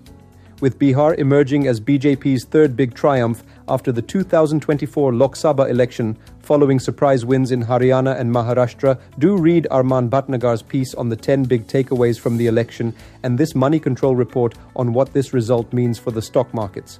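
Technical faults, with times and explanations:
No technical faults can be heard anywhere in the recording.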